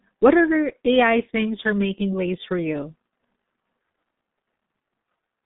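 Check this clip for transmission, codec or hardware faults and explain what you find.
One fault runs through the whole clip: G.723.1 codec coding. The speech has passed through this early internet-telephony codec at a very low rate, consistent with about 6 kbit/s. It codes 30 ms frames with a slowly updated model of the voice, and the line carries only about 150 Hz to 3.7 kHz, with nothing above 3.8 kHz. The heavy coding leaves the speech muffled and hoarse, with consonants smeared together.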